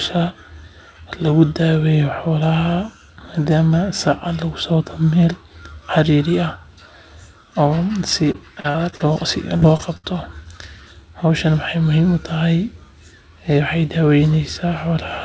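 Repeated packet loss (robotic sound) runs from 8.32 to 9.17 s. Six gaps, the longest 43 ms, were patched by extending the preceding sound, so about a fifth of the stretch turns choppy and mechanical.

Short concealed packet loss follows at 9.57–9.63 s and 9.77–9.81 s. Roughly 40 ms and then 20 ms went missing, and the receiver bridged each hole with a continuation of the last sound, heard as a brief smear or wobble.

A burst of packet loss at 9.97–10.06 s drops about 60 ms. The receiver sustains and fades the last sound before resuming later, skipping that moment. Through all of this the call band stops at 8 kHz, consistent with a G.722 path.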